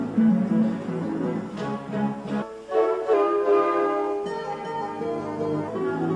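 Wrong sample rate from 3.14 to 5.68 s: the audio is played back slower than it was captured, with no rate conversion, so it runs at about 0.92 times speed and drops about 1.5 semitones. This fits 24 kHz material played at 22 kHz, making the sound lower and slower.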